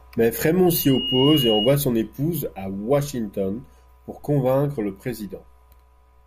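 At 0.66 s a loudspeaker feedback squeal starts, lasting until 1.79 s. A microphone is picking up the loudspeaker it feeds, and at about 2.9 kHz the loop gain has passed unity, so that frequency keeps reinforcing itself. It swells over a few tenths of a second into a sustained, piercing single tone that sits a few decibels above the speech, then stops.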